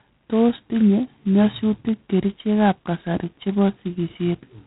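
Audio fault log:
Throughout, G.726 ADPCM at heavy damage. The speech carries a harsh, rasping hiss that rises and falls with its level. This codec sends only the difference from a running prediction of each sample, and here the grain points to 16 kbit/s, just 2 bits a sample. Such coarse steps leave large errors that ride on the signal. Nothing above 3.9 kHz remains, so the sound is narrow and muffled.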